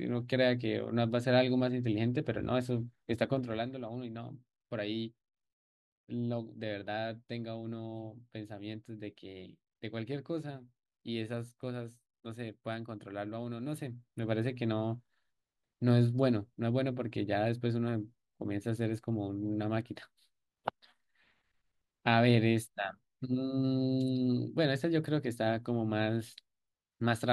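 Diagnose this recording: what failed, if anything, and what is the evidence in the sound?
A fine ticking, zipper noise, rides on the speech at 3.32 to 3.69 s as the level drops roughly 10 dB, and again at 13.63 to 14.35 s as it rises roughly 10 dB. The gain stage in the buffer path applies each change in unsmoothed steps, about 30 to 50 per second, each leaving a small click.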